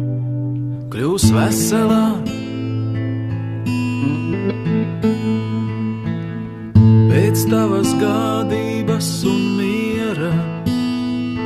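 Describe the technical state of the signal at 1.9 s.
Compressed frames are skipped from 1.88 to 1.91 s. About 20 ms of audio never plays. The sound jumps ahead at the join.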